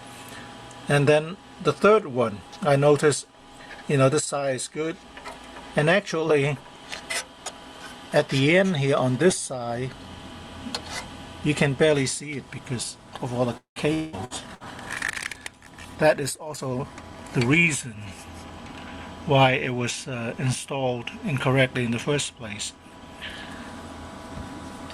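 From 13.57 to 14.66 s there is repeated packet loss with a robotic sound. Four gaps, the longest 187 ms, are patched by stretching the last sound. Nearly half the stretch turns choppy.

A call bitrate drop follows, from 14.44 to 16.70 s. The sound turns coarse, watery and dull, which fits the encoder falling from about 64 to 28 kbps.

From 16.09 to 17.82 s a jitter buffer speed-up removes roughly a fifth of a second of audio. Short pitch-period pieces are cut, so the sound runs 12% faster and feels hurried at unchanged pitch.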